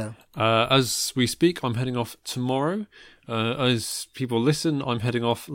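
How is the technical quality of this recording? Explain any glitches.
The recording has one glitch. At 3.92 s a single sharp snap cuts across the speech, a very brief click peaking at around -15 dBFS, sitting on top of the voice rather than interrupting it. It sounds like an electrical switching spike: a nearby switch, motor or static discharge likely arced for an instant, and the audio line picked up that burst of energy as this one tight, percussive crack.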